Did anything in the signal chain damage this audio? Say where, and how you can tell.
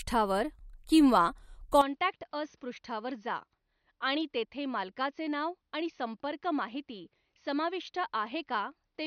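Yes. At 1.81 s the speech abruptly turns duller and boxier, and it stays that way to the end. Nothing survives above 6.3 kHz. The level falls by about 10 dB, and a faint new noise floor appears well below the speech. There is no gap at the change. This points to the capture stage. The system likely switched inputs to a poorer device, such as another microphone or a headset in call mode.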